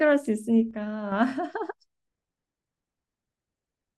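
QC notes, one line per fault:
0.71–1.12 s, one channel drops out: likely one side of the stereo feed goes silent for about 0.41 s. In the mono sum, the speech common to both sides drops abruptly by about 6 dB, then snaps back at 1.12 s.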